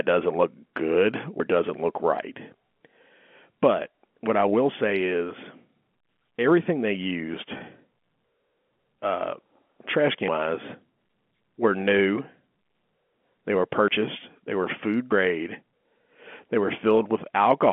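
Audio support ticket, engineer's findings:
Dropped buffer (overrun), 1.4 s and 13.88 s. Capture side likely failed to read its buffer before the hardware overwrote it; around 40 ms of sound discarded each time and the edges butted together. Symptom: sound jumps ahead abruptly, no gap of silence. Same size both times, suggesting a fixed buffer period on the input path.

Packet loss with pitch repetition, 7.58 to 7.60 s. Transport lost 20 ms, consistent with two 10 ms packets. Concealment bridged it by looping the last pitch period. Symptom: brief held, slightly buzzy tone, too short to fade to silence, then normal sound resumes. Concealment behaving as designed. Loss is upstream on the network path, not in the G.711 A-law line codec at 64 kbps, whose 200 to 3.4 kHz telephone band shows faint or no codec damage.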